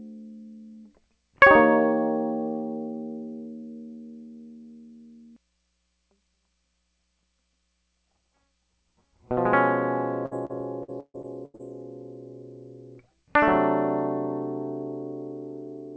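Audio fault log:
10.26–11.61 s, repeated packet loss (robotic sound): the music turns choppy for this stretch, with seven short holes, the longest about 139 ms. Packets went missing again and again, and each gap was bridged by stretching the last bit of sound, so about 31% of the span is a synthetic continuation. The repeated patching gives the robotic tone, and the lost material leaves pieces of the music absent, all heard within the call path's band-limit at 8 kHz.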